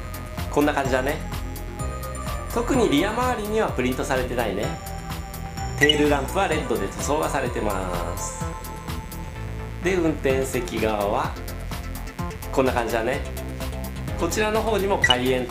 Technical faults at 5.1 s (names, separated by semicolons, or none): mains buzz